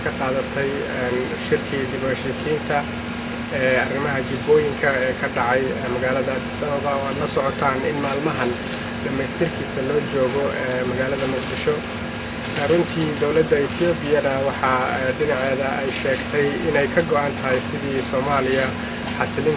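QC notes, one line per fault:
No technical faults are present anywhere in the signal.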